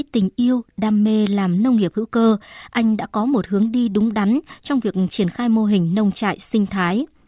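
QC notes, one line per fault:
No fault stood out when listening to this speech recording.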